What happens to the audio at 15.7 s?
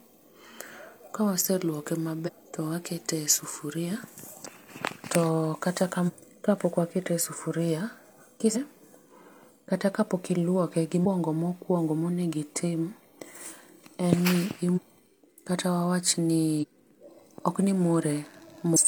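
Nothing goes wrong at 15.7 s; the speech carries on intact through that moment, with no dropout, click or other fault to be heard.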